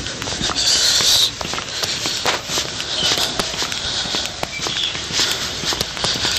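Hard clipping runs through the whole clip. The audio was pushed about 26 dB past what a stage in the chain could pass, so every peak is sliced flat. Less than one percent of the samples reach the ceiling, so the damage sits only on the loudest moments, where it bursts out as sharp crackle and spitting high-frequency harmonics. Those abrupt flat edges, rather than a gradual rounded thickening, distinguish it from soft saturation.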